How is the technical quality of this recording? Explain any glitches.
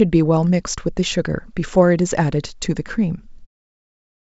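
No glitches: the speech sits within the G.722 wideband telephone band, with at most a faint hiss from that coding, and the level fades out smoothly around 3.5 s.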